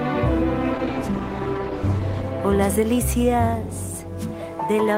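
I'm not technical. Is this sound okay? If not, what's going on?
No. From 0.77 to 2.35 s there's a call bitrate drop: the connection told the encoder to use far fewer bits, so the sound turns rough and muffled until it recovers.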